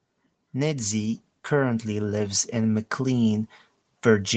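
The automatic gain control in this speech clip judged the input too quiet and kept raising its gain from 0.29 s to the end. The voice and the background noise swell together in a slow, steady climb rather than staying level. The audio is also band-limited to 8 kHz, consistent with the call path's Opus coding.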